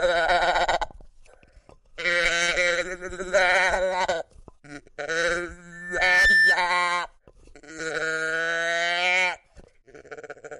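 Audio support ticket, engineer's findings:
Loudspeaker feedback squeal 5.72–6.61 s: single 1.8 kHz tone swelling over about half a second to roughly 5 dB above the sound. Mic-to-speaker loop gain above unity. Steady pitch, not a broadband hum.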